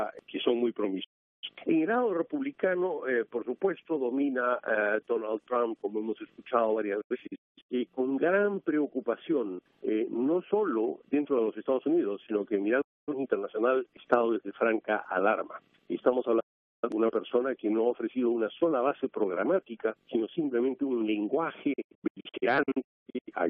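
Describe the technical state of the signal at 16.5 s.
At 16.5 s the signal is inside a digital broadcast dropout running from 16.40 to 16.89 s. The receiver stopped getting valid frames and muted until clean ones returned. The sound fades to silence in about 8 ms, and roughly 0.43 s of programme is lost, which points to around ten discarded frames.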